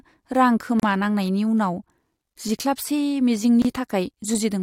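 Separately encoded pieces were joined without trimming each run's start-up delay and padded final frame, leaving a gap at a join of encoded pieces: about 35 ms of silence at 0.80–0.83 s and 27 ms at 3.62–3.65 s. Each abruptly cuts the speech, smeared at its edges, before it resumes.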